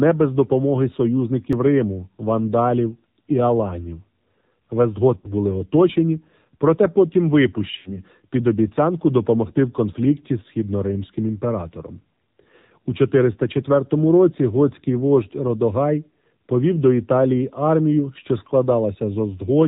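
Throughout, the AMR narrowband mobile codec leaves the speech buzzy and synthetic, its buzz pointing to a low mode near 7.4 kbps. A spectrogram shows nothing above 4 kHz.

At 1.53 s a jump in the sound marks a dropped buffer, likely from an overrun that lost a few milliseconds. The waveform shows a sudden discontinuity with no silent gap.

Lost AMR speech frames appear at 5.17 to 5.34 s, about 60 ms, consistent with three frames, and again at 7.77 to 8.03 s, about 80 ms, consistent with four. Each time the decoder repeats the last sound at falling gain, so it drags and fades before recovering roughly. On a spectrogram the harmonics smear flat, and the waveform shows the envelope tapering.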